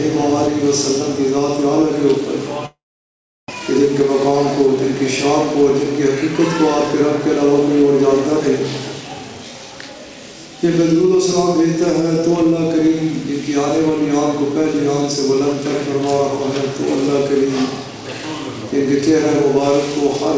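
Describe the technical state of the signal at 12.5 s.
At 12.5 s the audio is intact, with no dropout, glitch or distortion, just the steady band-limited sound of the G.722 call path with nothing above 8 kHz.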